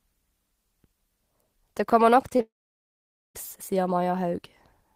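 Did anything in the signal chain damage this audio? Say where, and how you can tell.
Yes. Short concealed packet loss occurs at 2.29 to 2.33 s and again at 2.37 to 2.41 s, both just after "kommer nok". The damage happened in the network stage of a call. Each gap is about 20 ms of missing audio that the receiver's decoder covered by extending the preceding sound, with 14 ms and then 20 ms of synthesised fill. That fill is heard as two brief smears where the real waveform should continue.

A long network dropout follows from 2.41 to 3.37 s, again after "kommer nok", with roughly 0.94 s of audio never played. The receiver first stretches the last sound and lets it fade, and within about a tenth of a second that gives way to about 0.85 s of near silence. The audio then resumes without the lost stretch. The likely cause is packets failing to reach the receiver for almost a second.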